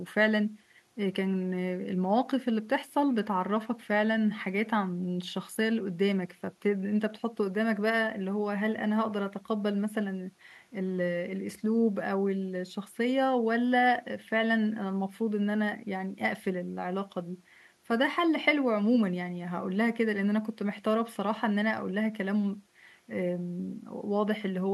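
Nothing stood out on listening to this speech recording.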